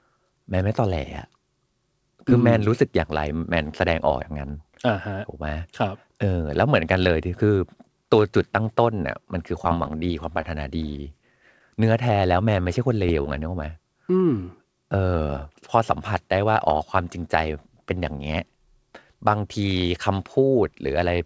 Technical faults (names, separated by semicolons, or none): repeated packet loss (robotic sound); short concealed packet loss